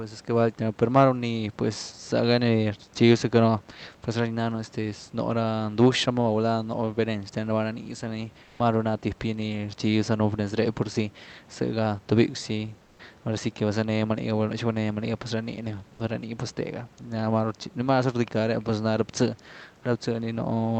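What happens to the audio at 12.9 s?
Comfort noise in place of the background appears from 12.85 to 12.99 s, a gap of about 140 ms. The likely cause is discontinuous transmission: the sender's voice detector judged the pause to be silence and stopped sending, so the receiver filled it with synthetic noise. The room's background, already about 30 dB below the loudest sound, gives way to a flat, featureless hiss about 6 dB quieter, then returns.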